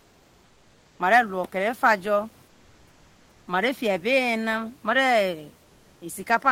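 Speech clip with comfort noise in place of the background at 0.00–0.99 s, 2.47–3.47 s and 5.63–5.99 s, where steady, featureless hiss replaces the room noise, likely from Opus discontinuous transmission.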